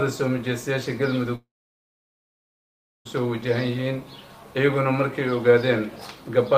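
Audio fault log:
1.35 to 3.07 s, long network dropout: the sound carries on for roughly a tenth of a second as a fading buzz, then drops to silence for about 1.6 s before resuming, with about 1.7 s of material skipped rather than delayed. This is likely a stalled stream where the receiver's concealment briefly extends the last sound and then gives up. Unlike a brief packet-loss glitch, the smeared tail gives way to a long silence, and the audio returns further along.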